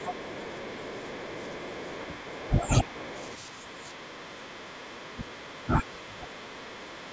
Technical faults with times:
0.00-2.46 other side's voice leaking through
0.92-0.99 speech suppressed in double talk
2.08-2.88 speech suppressed in double talk
2.84-5.07 other side's voice leaking through
4.44-6.45 speech suppressed in double talk
5.39-5.58 other side's voice leaking through
6.30-7.13 other side's voice leaking through

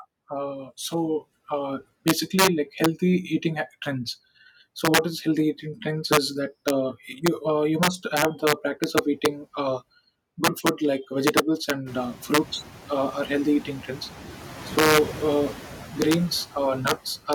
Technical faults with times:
0.00-17.34 integer overflow
0.00-17.34 noise suppressor artifacts

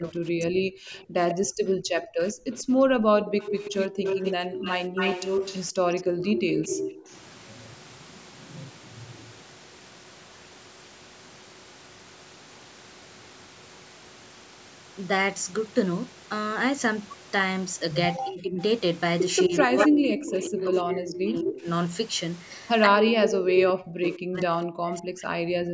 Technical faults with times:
0.00-3.98 speech suppressed in double talk
0.93-7.03 echo leak
5.73-7.12 speech suppressed in double talk
18.18-21.67 speech suppressed in double talk
19.58-21.60 echo leak
22.87-25.73 speech suppressed in double talk
23.19-24.08 echo leak

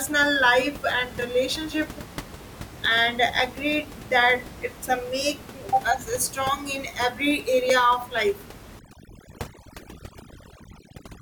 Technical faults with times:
3.40 block of digital silence
7.70 block of digital silence
8.79-11.21 overdone noise removal

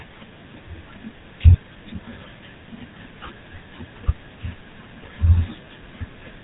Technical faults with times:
0.00-6.43 GSM full-rate codec

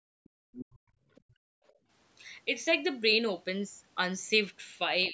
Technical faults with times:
0.00-1.89 background gated by the echo canceller
0.24-0.77 other side's voice leaking through
1.15-1.21 other side's voice leaking through
1.67-1.73 other side's voice leaking through
5.03-5.09 other side's voice leaking through
5.07-5.13 speech suppressed in double talk

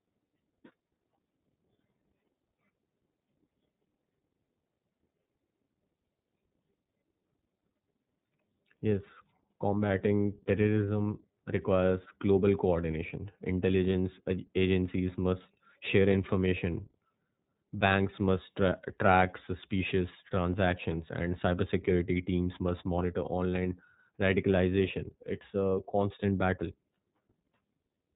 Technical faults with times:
0.00-28.16 iLBC codec

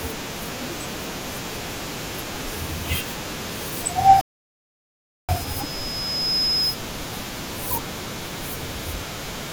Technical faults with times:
4.21-5.29 rebuffering stall

